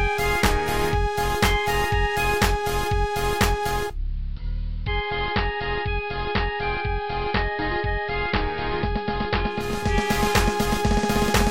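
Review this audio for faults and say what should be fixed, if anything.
Digital radio blending to analogue, 3.69 to 9.97 s: the receiver lost its digital stream and cross-faded over 489 ms to the AM broadcast, so level drops about 4 dB and hiss rises to roughly 35 dB below the signal. Better digital reception, or disabling blending in the receiver, would prevent it.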